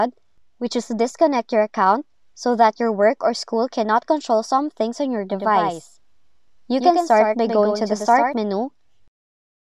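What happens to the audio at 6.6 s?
At 6.6 s the sound is doubled. A doubled audio track runs from 5.32 to 8.34 s. A second full-band copy trails by roughly 100 ms, about 5 dB quieter, with no decay. It likely comes from a slower capture path or an out-of-step edit. The copy starts and stops abruptly.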